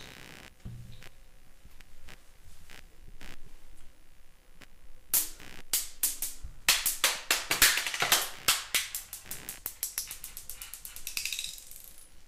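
Computer activity noise runs throughout the clip: a buzzy, chirping pulse repeating roughly 70 times a second, sitting around 25 dB below the main sound. Shifting processor or peripheral load disturbs the shared ground, so the interference follows the computer's activity rather than the audio.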